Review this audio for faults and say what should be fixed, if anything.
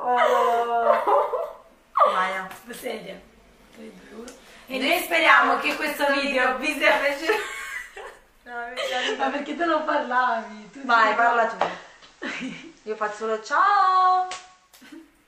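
At 8.69 s there's digital radio blending to analogue: over about 346 ms the sound cross-fades to the FM feed, bringing in hiss roughly 35 dB down, with the level unchanged, until it blends back at 14.83 s. Next time, lock the receiver to digital-only or improve reception so it never falls back.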